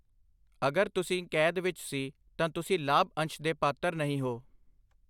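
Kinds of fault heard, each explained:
No audible faults in the speech: level, timing and continuity hold steady throughout.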